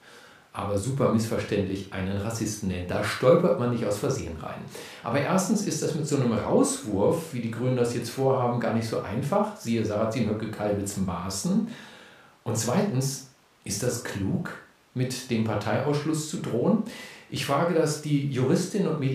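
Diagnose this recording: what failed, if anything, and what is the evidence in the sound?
Nothing failed: no stage of the chain leaves any audible evidence of a fault in this speech recording.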